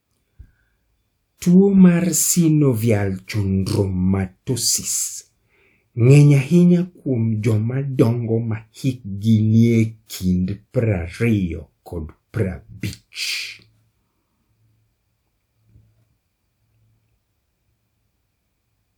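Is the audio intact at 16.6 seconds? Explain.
Yes, the speech at 16.6 seconds plays through cleanly, with no dropout, click, distortion or other fault at that moment.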